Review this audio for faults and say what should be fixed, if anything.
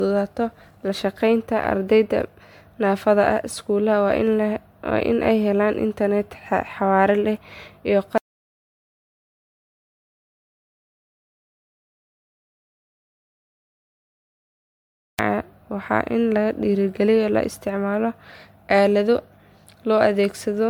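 Generation loss runs through the whole speech clip: swirly, hollow smearing and blurred consonant attacks, even though the bandwidth reaches about 20.1 kHz. That rules out a single low-bitrate encode and points to likely repeated MP3 re-encoding at 128 kbit/s, about seven times. Keep a lossless master and encode only once.

Audio dropout to silence runs from 8.18 s to 15.19 s, about 7.0 s lost. The sound stops mid-flow into silence. Unlike a noise gate, no room tone or decay remains, which suggests the input was likely lost to a disconnected device or failed link. Secure connections and monitor input levels during recording.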